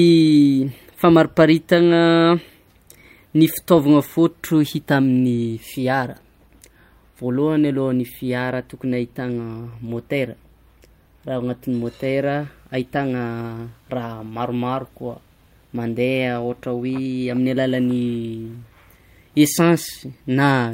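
Speech recording with no audible technical faults.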